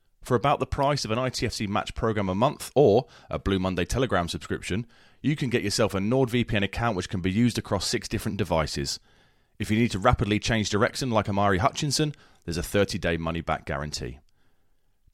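No technical faults can be heard anywhere in this recording.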